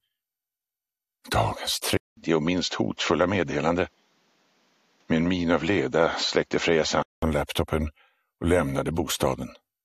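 At 1.97 s the sound cuts out for 200 ms. It returns duller, with nothing above 7.6 kHz and a faint new noise floor. Loudness barely changes. The likely cause is an input switched to a poorer device. Clarity returns at 7.22 s.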